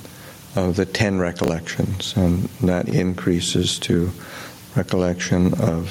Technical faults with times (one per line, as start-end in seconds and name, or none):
0.00-5.90 gain pumping
1.44-1.48 chunks out of order
2.86-2.92 chunks out of order